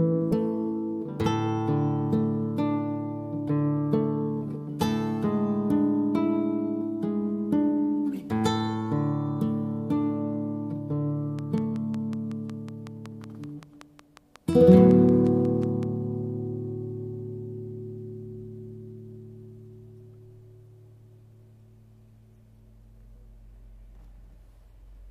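From 11.39 to 15.84 s a train of clicks ticks regularly at 5.4 per second, around thirty pulses about 5 dB above the sound, likely from electrical interference.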